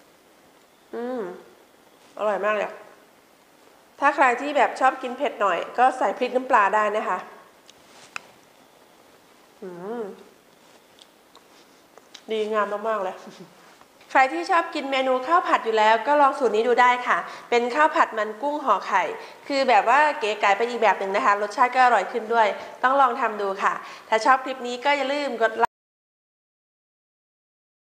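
At 25.65 s the sound cuts out abruptly and an audio dropout to silence runs to the end, about 2.2 s. The gap is silent with no room tone, likely from the input being lost while recording continued. Nothing from that stretch survives.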